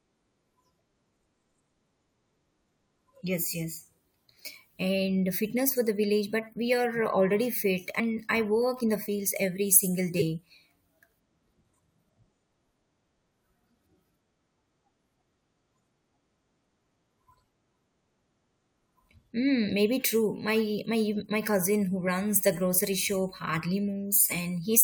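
At 7.99 s, just after "we are already fit" and before "I work in the", compressed frames are skipped. About a tenth of a second of speech vanishes. Shorter skips of about 20 ms follow at 9.08 s, at 10.18 to 10.22 s after "every single", at 22.07 to 22.09 s between "my cousin who" and "the grocery shop", and at 24.31 s. Whole frames never reach the output, so the speech jumps forward.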